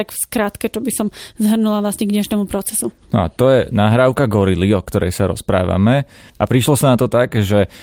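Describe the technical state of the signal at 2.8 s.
At 2.8 s the speech signal is intact, with no audible fault at that moment.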